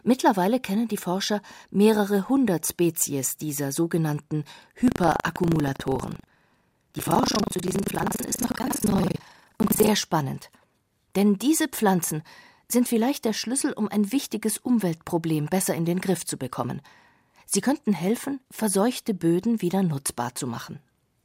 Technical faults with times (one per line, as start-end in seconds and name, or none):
4.84-9.90 buffer tearing